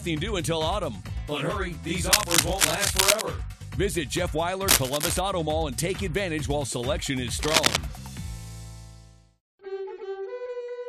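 Cable scratch noise appears at 2.11 to 3.22 s, 4.67 to 5.19 s and 7.41 to 7.78 s: dense, uneven scratching riding roughly 5 dB above the sound, likely from a worn cable or connector being moved. It shows as ragged broadband smears on a spectrogram and a thickened, spiky waveform.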